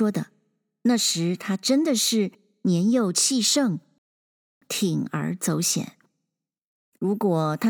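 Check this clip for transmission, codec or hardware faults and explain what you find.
One fault stands out: a rebuffering stall from 3.98 s to 4.62 s. The speech halts into silence for about 0.63 s, then picks up exactly where it stopped, because the player exhausted its downloaded audio and waited for more to arrive. What separates it from a network dropout or packet loss is that no speech is skipped or smeared: the sentence continues intact, and the clip simply runs longer by the length of the gap.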